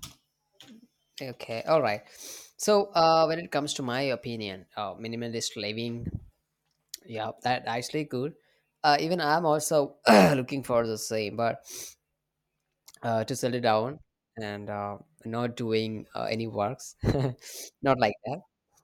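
Speech recording with no audible technical faults anywhere in the clip.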